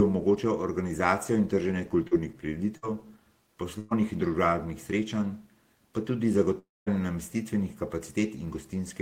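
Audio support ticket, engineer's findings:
Short concealed packet loss at 2.07–2.13 s, right after "omogočal organizacijo in trženje". Brief smear in the speech. About 40 ms never reached the decoder. The receiver's concealment extended the preceding sound over the hole, then blended back.

Burst of packet loss at 2.77–2.84 s and 3.78–3.93 s, the second just before "in družabnih srečanj pa". Held buzz or fading hiss, then a jump ahead. About 60 ms and 120 ms lost. Concealment continued the last sound, then resumed later.

Long network dropout at 6.59–6.88 s, after "družabnih srečanj pa tudi". The last sound carries on and fades. Then about 0.21 s of silence. Speech resumes with roughly 0.28 s missing. Likely cause: an upstream network stall starving the jitter buffer.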